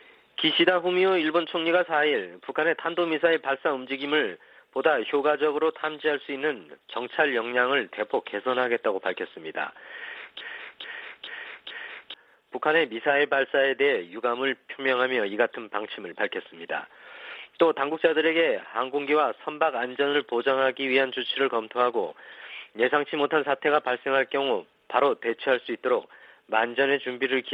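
From 10.41 to 12.14 s, a 0.43 s fragment repeats exactly four times back to back, a broken-record loop. The likely cause is a stalled player or stream resending its last fragment, which loses the audio that should have played.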